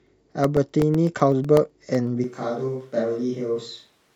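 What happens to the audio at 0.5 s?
At 0.5 s the speech sits inside a run of periodic USB or driver dropouts from 0.07 to 2.07 s: roughly 1 ms silent gaps every 0.125 s, heard as evenly spaced ticks rather than random crackle.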